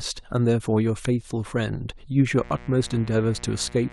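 From 2.38 s to the end, a steady, raspy mains buzz sits about 20 dB under the speech: 60 Hz switching spikes whose harmonics reach several kHz.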